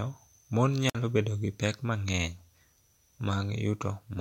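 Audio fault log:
0.88–0.95 s, wireless microphone squelch dropout: the FM radio link fades, hiss briefly swells, then the receiver's squelch mutes the output for 53 ms before speech returns on "bedo gi pek". The waveform shows a flat near-silent gap, and the spectrogram shows a broadband smear, then an empty column.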